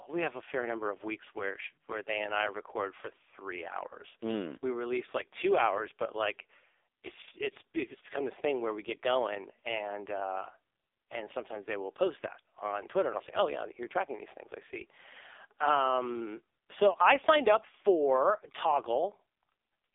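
Speech squeezed through the AMR narrowband mobile codec for the whole clip, with nothing below about 300 Hz or above 3.7 kHz. The voice comes out heavily buzzy and synthetic, which fits one of AMR-NB's lowest bitrates, around 5 kbps.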